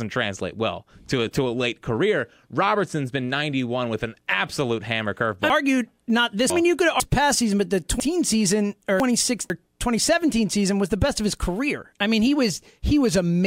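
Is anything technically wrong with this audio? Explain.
Yes. Chunks out of order at 5.5–7.0 s and 8.0–9.5 s: a 0.5 s chunk arrives two chunks late, so the speech jumbles briefly, with three hard joins.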